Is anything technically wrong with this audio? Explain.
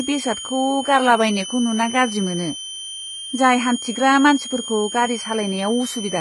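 Yes, two things are going on, and both run the whole way through the speech.

First, there's a switching supply whistle. A high, thin tone sits around 3 kHz, wandering between roughly 3.02 and 3.23 kHz. It's a switching power supply chattering in an audible burst mode, or two supplies beating against each other, so the pitch drifts with load. It's fairly loud, only about 10 dB under the speech.

Second, the treble has that rebuilt, metallic edge, and the s sounds come out gritty and lispy. Nothing survives above about 11.8 kHz. That's likely HE-AAC compression at a very low bitrate, around 16 kbps. At that rate the codec keeps only the lower band and fakes the top by copying lower bands upward under a coarse envelope, so the upper harmonics don't line up with the real ones and the top end sounds synthetic.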